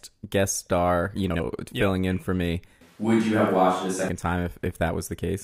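Just after "guest star you", from 1.30 to 1.40 s, the sound breaks into a brief garbled flutter before "filling yep in for" resumes. This is frames out of order. Two neighbouring blocks of about 48 ms each were delivered and decoded in swapped order, so that short stretch plays with its halves exchanged. Nothing is missing, and the timing after it stays intact.

After "yep in for me", at 2.81 s, the sound abruptly turns roomy and hollow and loses bass, with faint background noise well below the speech. The level stays about the same. At 4.09 s it snaps back just as suddenly to the earlier close, full sound. The likely cause is a switch to a distant microphone, with the close microphone's signal dropping out and a farther one, such as a camera's, covering that stretch.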